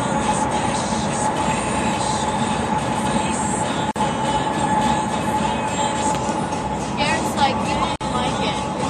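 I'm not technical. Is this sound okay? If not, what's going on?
No, there is a gap at a join of encoded pieces at 3.91 s and again at 7.96 s, each a brief silence of about 47 to 49 ms. The audio seems to have been saved in separate chunks and stuck together, leaving silent padding at each seam roughly every 4 s. The sound then resumes where it stopped.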